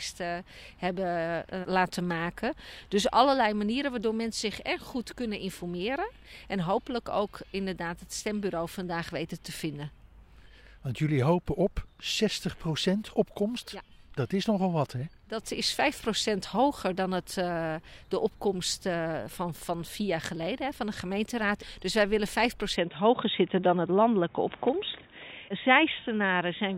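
From 22.76 s to the end, the sound abruptly narrows to nothing above 3.8 kHz, shifts level by about 5 dB, and gains faint new background noise, likely an input switched to a poorer device.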